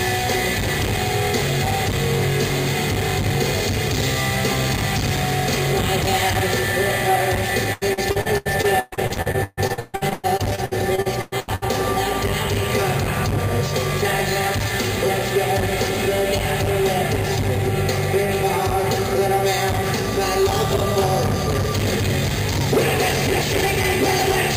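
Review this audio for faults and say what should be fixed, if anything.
Repeated packet loss (robotic sound) from 7.73 to 11.64 s: packets kept arriving late or not at all, and each gap was patched by extending the previous sound. The result is choppy audio with pieces missing, with gaps up to 140 ms and about 38% concealed. A larger jitter buffer and forward error correction on a more stable network link would prevent it.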